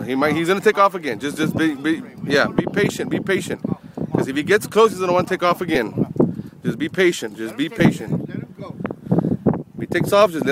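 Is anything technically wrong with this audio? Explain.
Yes. There are brief lost LE Audio frames at 5.75 s and again at 7.79 s, each a gap of about 10 ms, which fits a single lost frame. The LC3 decoder covers each gap by repeating the previous spectrum with randomised phase signs, so a short noisy smear replaces the sound. A plain dropout would instead leave a hard silent hole or click. The light lossy compression across the audio is a separate, normal layer.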